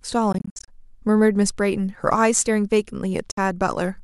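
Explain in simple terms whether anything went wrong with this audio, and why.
The speech cuts out in brief stuttering gaps between 0.32 and 0.68 s, and once more at 3.31 s, resuming further along. This is a Bluetooth dropout, likely from sound arriving too late to play.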